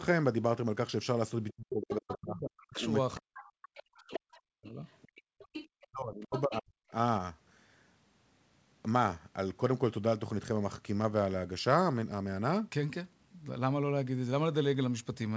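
Other side's voice leaking through first appears from 1.49 to 2.13 s, a second voice sitting roughly 10 dB under the talker, and returns more faintly, around 15 dB down, from 3.38 to 6.58 s. The likely cause is a loudspeaker on the talker's device whose playback the echo canceller failed to fully subtract from the microphone signal, so the far end bleeds back into the send path as a secondary layer beneath the main speech.

Speech suppressed in double talk runs from 1.51 to 4.82 s and again from 5.86 to 6.93 s, overlapping both stretches of leakage. With both ends talking together, the canceller likely could not tell the local talker from the echo and attenuated everything. The talker's speech sinks by as much as roughly 40 dB, becoming muffled or breaking into pieces across about three seconds in the first span and about one second in the second.

Background gated by the echo canceller strikes at 5.21 to 5.38 s. 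While the loudspeaker was active the canceller clamped the microphone hard, pulling the room tone down by about 39 dB for around 150 ms. The ambience briefly vanishes into near silence, then snaps back once the suppression releases, all heard through a call band that stops at 8 kHz, consistent with G.722 at 64 kbps.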